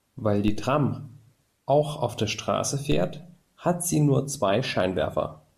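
The waveform's zero line jumps by about -20 dBFS twice, a DC step at 0.48 s and again at 2.92 s, then drains away through a 2 Hz high-pass within a fraction of a second. Each step is heard as a low thump beneath the continuing speech.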